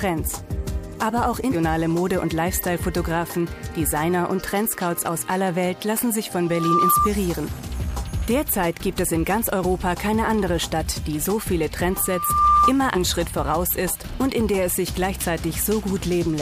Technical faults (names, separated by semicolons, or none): loudspeaker feedback squeal